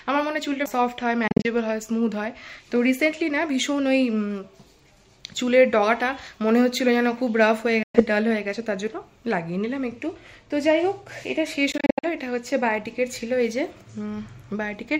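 At 1.28 to 1.48 s, 7.83 to 8.02 s and 11.72 to 12.05 s the sound drops to silence with abrupt edges, the first and last as clusters of short holes. This is likely a Bluetooth dropout, with packets failing to reach the headphones in time. Unlike a stall, the sound resumes further along, as if it had kept playing.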